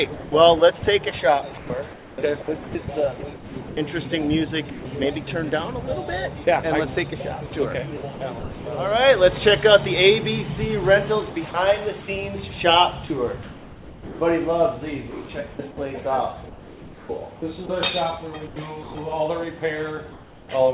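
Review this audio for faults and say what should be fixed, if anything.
Sound chopped by the voice detector at 0.14–3.77, 7.46–8.66, 11.3–12.08, 13.07–14.21, 15.11–15.59 and 16.49–18.95 s. The detector likely gated repeatedly, swapping quiet parts for comfort noise.

Sound dropped by the voice detector at 4.7–4.85 s and 6.44–6.47 s. The sound gives way to steady noise, likely because the detector mistook it for background.

To prevent both, disable voice activity detection or lower its threshold and lengthen its hangover time.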